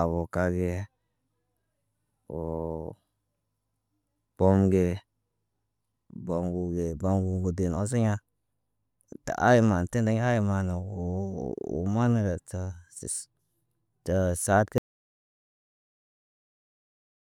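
At 14.78 s the speech cuts off mid-flow into an audio dropout to silence lasting to the end, about 2.5 s, with no room tone left. The input was likely lost while recording continued. The waveform goes flat and the spectrogram turns blank.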